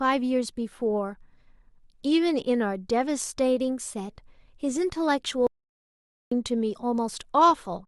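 At 5.47 s the speech cuts off abruptly and the track falls to silence until 6.32 s, a gap of about 0.85 s, before resuming mid-flow. This is an audio dropout to silence: there is no room tone or noise floor in the gap, only silence. The likely cause is a momentary loss of the input signal, from a device disconnect, link failure or accidental mute, while recording continued. Whatever was spoken in that interval is lost.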